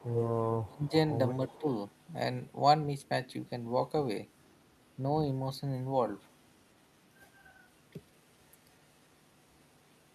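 From 0.0 to 0.68 s an echo leak is audible: a delayed copy of the speech trails it by about 289 ms at roughly 10 dB below the direct signal. This is likely a far-end echo canceller failing to remove its loudspeaker pickup. The echo recurs more weakly at 1.48–2.13 s, around 25 dB down, then as a faint residue some 40 dB down at 4.31–4.94 s, 6.3–6.97 s, 7.69–7.81 s and 8.19 s to the end.

Speech suppressed in double talk follows at 0.67–0.93 s. The speech dips sharply, by as much as about 25 dB, for around 200 ms, likely because the canceller could not separate the local talker from the echo during overlap and attenuated both. A shorter, shallower dip of about 10 dB, lasting roughly 50 ms, occurs at 1.6–1.65 s, inside the second echo stretch.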